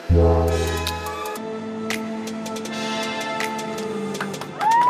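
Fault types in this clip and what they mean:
Section at the wrong speed: from the start to 1.37 s the sound runs hurried and shrill, at 1.93 times its natural pace and about ten semitones too high, then drops to normal. That stretch was likely played or edited against the wrong clock.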